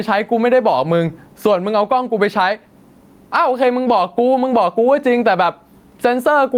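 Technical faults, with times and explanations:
Throughout, gain pumping: a level swing of around 15 dB, flattening the speech dynamics. The likely cause is excessive input gain with a fast limiter clamping each peak.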